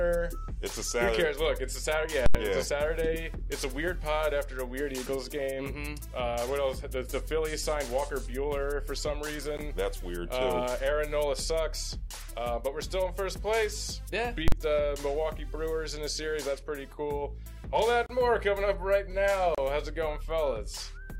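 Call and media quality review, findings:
Invalid numbers at full scale: 2.26–2.35 s (85 ms, fits a 4096-sample block) and 14.48–14.52 s (43 ms, fits 2048). Loud pop in, dead gap, pop out. DSP math spat out inf/NaN, clamped to max output for the whole block.

Block of digital silence: 9.57 s (15 ms), 18.06–18.10 s and 19.55–19.58 s (32 ms each). Hard cut to zero and back. Likely output buffer not filled in time, so zeros went out.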